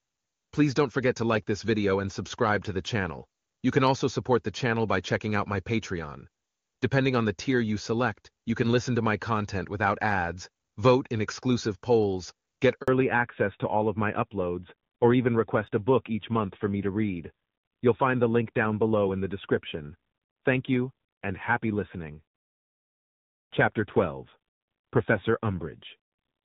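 Speech on a phone call that sounds clear and wideband for the first half, consistent with HD Voice running near the top AMR-WB rate, until a handover gap right after "in exclusive polls get". At 12.82 s the audio fades out within a few tens of milliseconds and stays silent for about 60 ms, to 12.88 s. That's the phone switching networks, with no speech frames arriving while the new link comes up, so whatever was said in that slice is gone. When the sound returns it has fallen back to narrowband, and stays that way to the end at about 26 s. Everything above 4 kHz is missing, so the speech turns duller and boxier, and there's a rough, grainy edge to it. That combination points to the call dropping from AMR-WB to the older AMR-NB codec, which fits a rate around 7.4 kbit/s.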